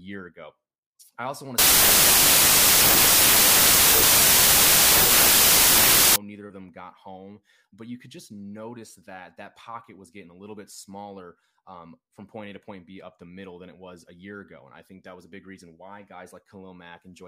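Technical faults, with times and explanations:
1.58–6.16 s, wrong sample width: after "I also want to", the speech turns into loud noise with the voice buried in it, playing at 0.667 times speed and lower pitch. This fits packed 24-bit samples being read as 16-bit, which splits bytes across values, until "neither of them got".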